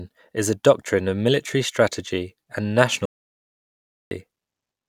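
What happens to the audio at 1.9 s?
Nothing goes wrong at 1.9 s; the speech carries on intact through that moment with no audible fault.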